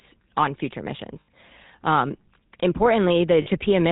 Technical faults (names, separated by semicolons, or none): GSM full-rate codec; lost GSM frames